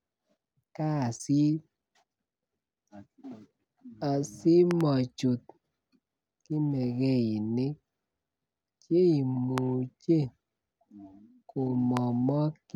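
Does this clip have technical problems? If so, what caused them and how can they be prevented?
Yes. Loud pops at 4.71–4.83 s (a double), 9.58–9.60 s and 11.97–11.99 s jump roughly 15 dB above the speech, likely from voltage spikes via plugging, switching or static. Prevent them by muting the input before touching cables or switches and by grounding equipment properly.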